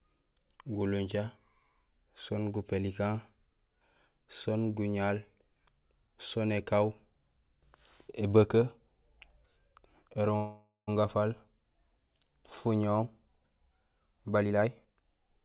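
From 10.36 to 10.89 s the sound stalls: the last moment is drawn out as a fading buzz that sinks to silence for its final 150 ms, then resumes where it stopped, with nothing lost. This call audio freeze likely came from delayed packets draining the jitter buffer, adding about half a second of delay.

From 13.99 to 15.42 s the speech runs hurried at about 130% speed with unchanged pitch. This jitter buffer speed-up trims repeated pitch-period slices, roughly 0.4 s in total, to shed the built-up delay. Over this narrowband call path, with nothing above 4 kHz as from G.711 mu-law, the clipped slices stay pitch-steady.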